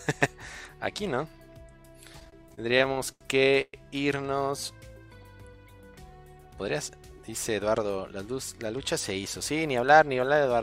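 From 2.13 to 3.23 s, repeated stalls (stutter): the jitter buffer ran empty fifteen times, with about 250 ms of held-over sound and the longest gap 84 ms, so the audio drags. At 3.61 to 3.75 s, a call audio freeze inserts a 119 ms gap, likely from delayed packets; the continued sound fades to 40 ms of silence before the audio resumes. From 6.38 to 6.90 s, a jitter buffer speed-up trims about a tenth of a second of excess buffered audio, so the sound runs at 115% speed without a pitch change.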